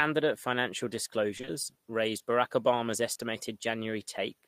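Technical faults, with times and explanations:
1.37–1.49 s: short concealed packet loss, three back-to-back events. Each drops 20 ms of audio, which the decoder fills by extrapolating the preceding sound before blending back. Chained together, they give a smeared, wobbling stretch of about 120 ms in which brief speech detail can disappear.
3.13–3.17 s: short concealed packet loss, a single event. 20 ms of audio failed to arrive in time and was replaced by a continuation of the sound just before it, then cross-faded into the real signal. The result is a brief smear or wobble rather than a silent gap.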